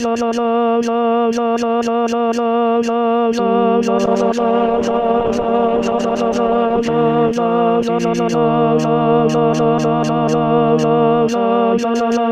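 The audio suffers a call bitrate drop from 4.07 s to 8.57 s. The sound turns rough and watery, and the top end goes dull. That fits the encoder being pushed from about 32 kbps down to about 12 kbps after the call's bandwidth estimate fell. At that rate the codec quantises coarsely and trims the high frequencies. The worst stretch lasts about 2.9 s. Detail and brightness then return as the bitrate recovers.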